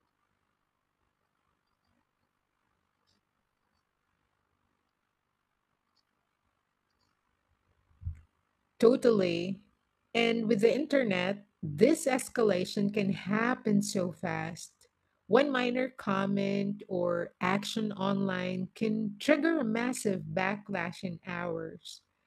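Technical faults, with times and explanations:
Throughout, overlap-add ripple: the speech was split into windowed frames and rejoined with an overlap whose windows do not add up to a steady gain, so the level dips and swells once per frame, about 11 dB deep, at around 50 times a second. That fast pulsing gives a rough, buzzy, robotic tremolo. On a waveform the envelope shows a regular scalloped pattern, and a spectrogram shows evenly spaced vertical striping across all frequencies.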